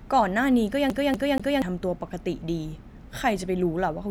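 From 0.9 to 1.62 s the speech sticks like a CD stuck on one turn: a 0.24 s slice repeats three times, seen as identical spectrogram blocks split by brief gaps.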